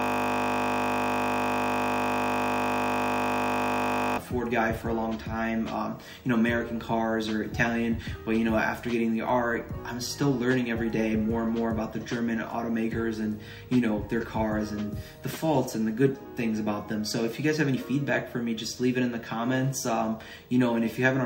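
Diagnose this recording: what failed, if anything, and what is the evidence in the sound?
Video or display buzz, in the analogue wiring. A 50 Hz buzz with hash and a 15.6 kHz line tone runs throughout, around 35 dB below the signal.

System hang loop, at the driver or buffer stage. From the start to 4.18 s, one 20 ms piece repeats 208 times. That makes a steady 50 Hz buzz while the system was frozen.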